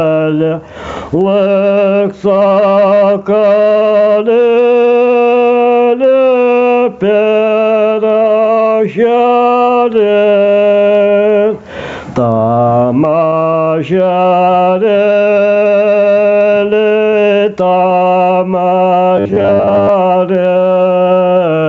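Gain pumping runs through the whole clip. The input gain is likely set far too high, with a fast limiter or compressor clamping it on each loud passage. The level swings by roughly 10 dB. Loud and quiet parts sit close together and the sound is squashed. The audio is band-limited at 8 kHz by the call path.

From 19.17 to 19.89 s there is robotic sound from repeated short buffers. New audio is arriving too slowly, and the gaps are likely filled by looping the most recent short block. This points to a 10 ms block, since the imposed buzz sits at 100 Hz. Around half of the material in that stretch is repeats rather than real audio, so it turns into a rigid, metallic drone that only loosely tracks the original.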